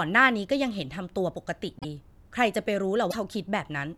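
Speech with two brief garbled skips, at 1.79–1.85 s and 3.10–3.15 s, each lasting about two 26.1 ms frames. These show as short broadband smears or gaps in the spectrogram and abrupt waveform discontinuities, likely from a broken MP3 bit reservoir after lost frames.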